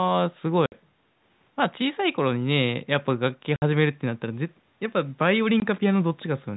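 Three abrupt dropouts cut the speech: a 60 ms hole at 0.66 s, another 60 ms hole at 3.56 s, and a brief 20 ms gap at 5.6 s. This is packet loss filled with silence. Lost packets were replaced with nothing, so the gaps come in whole multiples that fit 20 ms packets. The edges are hard because the signal drops straight to silence. The telephone-band G.711 coding can be heard throughout.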